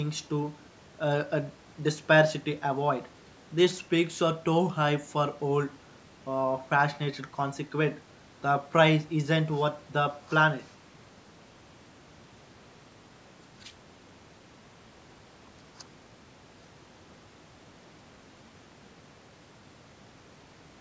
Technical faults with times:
none

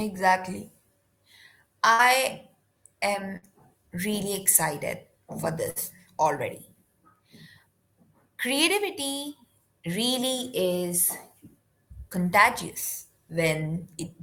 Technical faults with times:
1.93-2.02 burst of packet loss
3.37-3.45 burst of packet loss
5.70-5.79 burst of packet loss

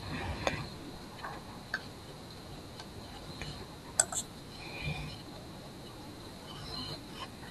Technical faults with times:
none

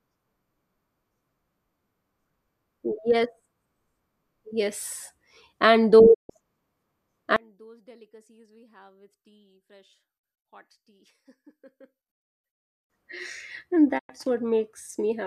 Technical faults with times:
6.13-6.31 digital broadcast dropout
7.36-12.90 one channel inverted
13.97-14.11 digital broadcast dropout

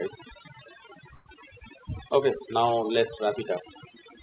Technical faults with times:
0.00-4.23 overdone noise removal
1.14-1.28 call audio freeze

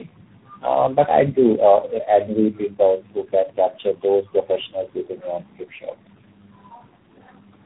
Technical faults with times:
0.00-7.65 tandem speech coding

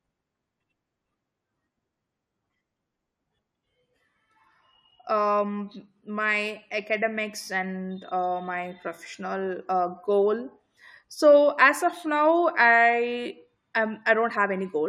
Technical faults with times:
none

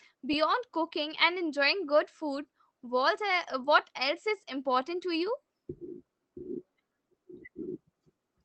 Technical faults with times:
none

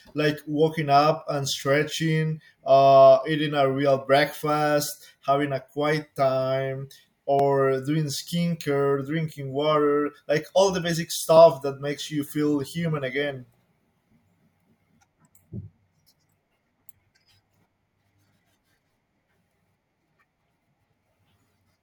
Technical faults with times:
7.39 dropped buffer (overrun)

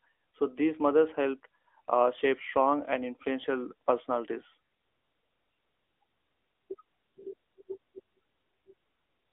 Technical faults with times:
0.00-9.32 AMR narrowband mobile codec

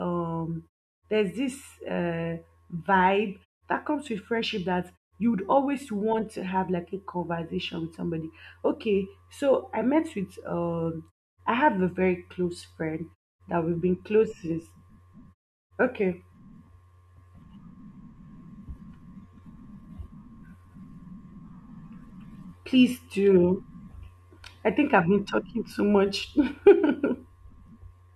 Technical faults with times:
none

